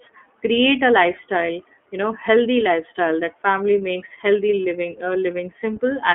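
iLBC codec damage runs throughout: the speech is confined to 250 Hz to 3.4 kHz and coded in independent 30 ms frames, giving a rough, synthetic edge.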